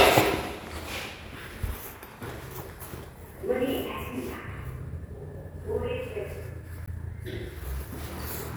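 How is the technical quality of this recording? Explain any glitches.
The recording has two short glitches, at 0.87 to 0.90 s and 6.83 to 6.89 s, both from damaged data in a compressed stream. In each, part of the encoded data was corrupted, so the decoder misread the affected frames and lost sync until it found a valid frame header again. The result is a brief chirp or blip lasting a few tens of milliseconds, with the second dropout more than twice as long at roughly 55 ms.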